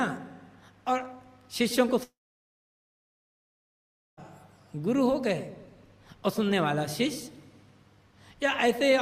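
At 2.03 s the sound fades into a short buzz, then silence until 4.19 s. A long network dropout likely lost that 2 s stretch.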